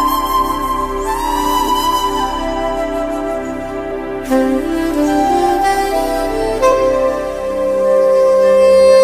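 Compressed frames skipped at 1.67, 3.90, 5.48 and 6.71 s jump the audio ahead by whole 23.2 ms frames, leaving seams on a spectrogram.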